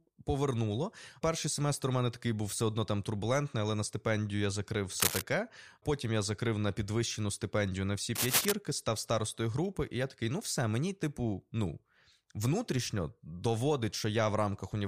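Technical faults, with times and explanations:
5.00–5.22 s (after "на стипендію я закрив") and 8.15–8.52 s (after "підвищену стипендію на всі", before "став старостою групи і"), cable scratch noise: a worn cable or connector was likely shifted, its contact resistance jumping rapidly, so dense, uneven scratching bursts cover the speech at roughly its own level.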